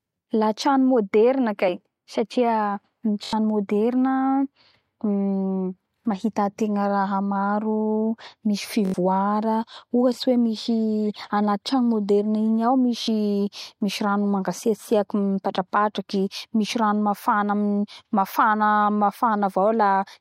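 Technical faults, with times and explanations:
3.24–3.33 s, 8.85–8.94 s, 13.04–13.08 s: repeated buffer. A 21 ms piece, fitting a 1024-sample buffer, replays four, four, then two extra times with hard joins, heard as a stutter rather than a dropout's silence.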